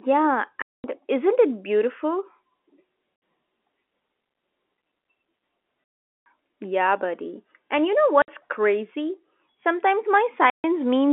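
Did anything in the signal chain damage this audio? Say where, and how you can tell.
Yes. The damage happened at the network stage: packet loss filled with silence. The sound cuts to silence at 0.62 to 0.84 s (220 ms), 3.16 to 3.22 s (60 ms), 5.98 to 6.26 s, 8.22 to 8.28 s (60 ms) and 10.5 to 10.64 s (140 ms). The gap lengths are whole multiples of 20 ms, which fits 20 ms packets. On the waveform these show as flat holes with hard edges. On a spectrogram they are blank vertical bands. The receiver inserted silence where the lost packets should have played, on a telephone-band G.711 link.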